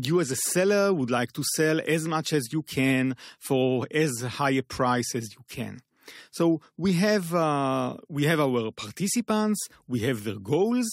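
No technical faults can be heard anywhere in this speech recording, and the signal stays steady and intact throughout.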